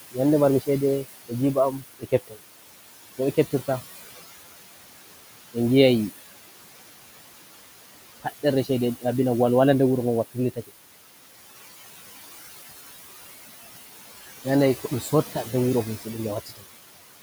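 Noise suppressor artifacts run through the whole clip. The suppressor pulls the room noise, which sits about 14 dB below the speech, down by about 16 dB between phrases, so the background pumps. Speech cut by the noise suppressor occurs from 1.72 to 2.37 s and from 16.46 to 16.63 s. Soft speech taken for noise drops by up to about 19 dB and 16 dB, and those sounds come across faint or swallowed.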